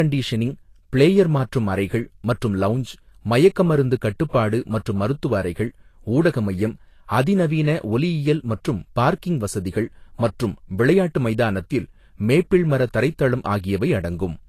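Throughout, likely low-bitrate audio saved at a high bitrate: the generous re-encode cannot restore what the first pass removed, leaving nothing above 14.2 kHz.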